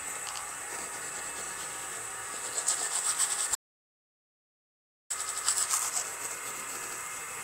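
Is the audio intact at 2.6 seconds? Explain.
Yes, at 2.6 seconds the sound plays through intact, with no dropout, click, distortion or other fault at that moment.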